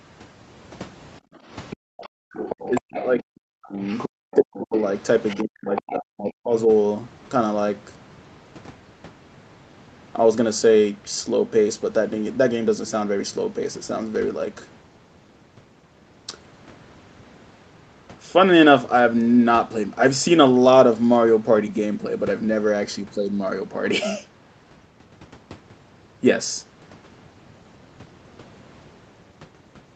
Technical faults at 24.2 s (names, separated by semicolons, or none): none